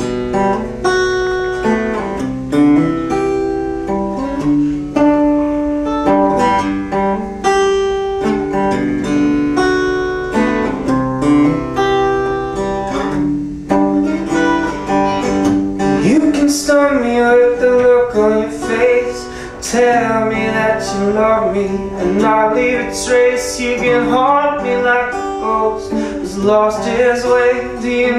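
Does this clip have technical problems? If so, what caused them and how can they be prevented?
Yes. Bursts of burbling at 1.21 to 1.56 s, 8.78 to 9.26 s and 21.11 to 21.39 s are DAB burbling: reception bit errors corrupted MP2 sub-band levels frame by frame. Better antenna placement or a stronger multiplex signal would prevent it.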